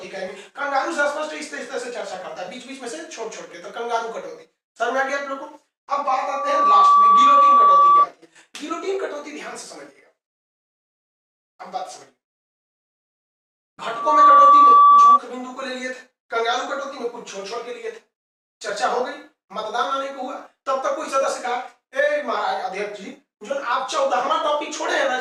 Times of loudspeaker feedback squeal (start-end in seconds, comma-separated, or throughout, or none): 6.08-8.07, 13.88-15.20